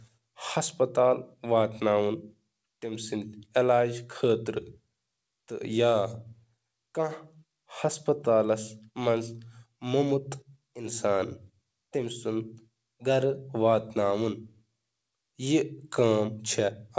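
No technical faults occur at any point in this speech, which comes through a call link that carries nothing above 8 kHz.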